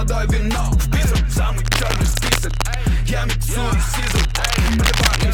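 A worn cable, connector or control being moved is the likely cause: its contact resistance jumps about, adding cable scratch noise from 1.65 to 2.76 s and again from 3.95 to 5.24 s, heard as dense, uneven scratching only slightly quieter than the sound beneath.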